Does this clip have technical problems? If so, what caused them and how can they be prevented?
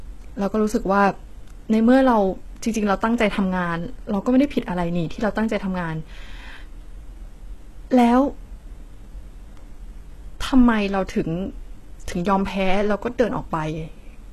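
Yes. Throughout the speech there's a hard ceiling with nothing above 12.3 kHz, and the treble that is there sounds synthetic: s sounds come out gritty and lispy, with a metallic sheen. That's likely HE-AAC compression, and heavy damage like this points to a very low bitrate, on the order of 16 kbps. The codec keeps only the lower spectrum and fakes the top end by copying lower bands upward under a rough envelope, so the harmonics up there don't line up with the real ones. To prevent it, encode speech at a higher bitrate with plain AAC or Opus, so the treble is coded rather than reconstructed.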